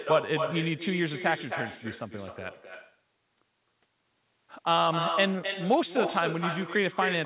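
From start to finish the speech carries an echo with no canceller: the far end replays it through a loudspeaker, its microphone catches it, and it returns about 6 dB quieter, roughly a third of a second late, a distinct delayed copy rather than the smooth tail of room reverberation, thinned further by the band-limited call path that stops at 4 kHz.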